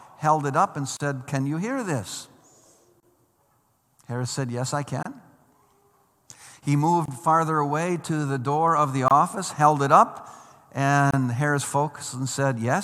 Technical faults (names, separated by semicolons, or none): gap at a join of encoded pieces